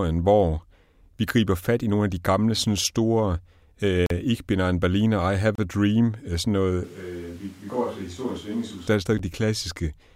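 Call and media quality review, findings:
Block of digital silence, 4.06 to 4.10 s: 40 ms hole in the speech, hard edges. Likely output buffer not filled in time, so samples replaced by zeros with no fade.

Block of digital silence, 5.55 to 5.58 s, right after "I have": 30 ms dropout, same abrupt cut. Likely same underrun mechanism.

Block of digital silence, 9.18 s, after "der er": 10 ms gap, heard as a tick. Same zero-fill fault.

Switch to a distant microphone, 6.84 to 8.87 s, starting after "øh sådan noget" and ending before "der er": sudden jump to a roomy, hollow, bass-light sound, about 10 dB quieter, with room noise roughly 25 dB below the speech. Likely close-mic feed lost, fallback to a farther pickup.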